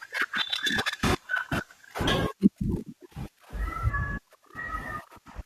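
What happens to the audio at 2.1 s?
At 2.07 s the speech jumps abruptly forward with a brief blip, most likely a stream segment skipped after one chunk failed to load. The waveform shows a sudden discontinuity, and the spectrogram shows a thin vertical broadband line where the content changes.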